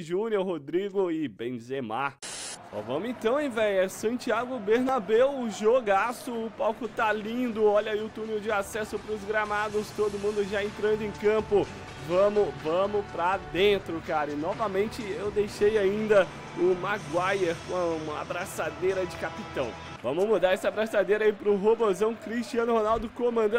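At 4.89 s a tiny skip, about 15 ms, is joined with no silence; likely audio missing between 10 s chunks, seen as an abrupt waveform discontinuity.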